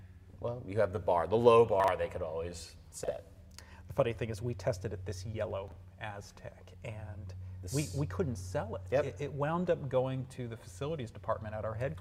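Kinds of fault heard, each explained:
Chunks out of order: three times, a 40 ms block arrived one slot late and played after its neighbour, leaving a brief jumbled stutter.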